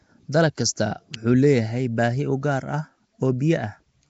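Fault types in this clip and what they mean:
Nellymoser compression: The speech carries a rough, hissy halo and a smeared, underwater character throughout, with nothing above 7.7 kHz, which fits a low-rate Flash-era codec near 32 kbps, likely Nellymoser Asao. Spending so few bits on each short block leaves quiet bands empty and filled with noise. A spectrogram shows a hard ceiling at 7.7 kHz, patchy noise-filled gaps between harmonics, and blocky, grainy texture instead of clean formant lines.
Electrical switching spike: At 1.14 s a sharp snap sits on top of the speech, the kind of pickup a nearby switch, motor or static discharge would likely cause when its arc couples into the audio line. It is not part of the speech itself. On the waveform it shows as a near-vertical spike standing above the surrounding level. On a spectrogram it appears as a thin vertical stripe running across the band up to the 7.7 kHz ceiling.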